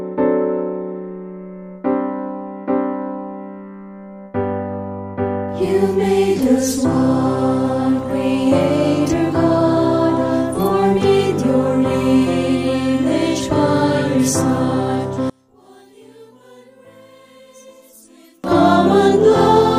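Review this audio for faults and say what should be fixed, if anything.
One channel inverted, from 15.30 to 18.44 s: the sound abruptly collapses by about 33 dB when heard in mono, leaving only a faint residue. The likely cause is one stereo channel flipping polarity, so everything common to left and right cancels on summing and only the small difference between channels survives. Prevent it by checking polarity on every channel path and monitoring a mono fold-down during editing and export.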